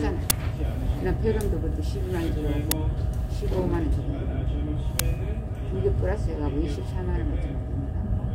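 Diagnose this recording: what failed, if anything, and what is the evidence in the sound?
At the driver or buffer stage, an uninitialised buffer fault occurred: blocks were handed to playback before any audio had been written into them, so whatever stale memory they held was played as samples. In this recording of sounds, that shows up as three short, loud cracks at 0.30 s, 2.71 s and 4.99 s. The first crack lasts about 10 ms and the other two about 5 ms each, matching the length of one unfilled block.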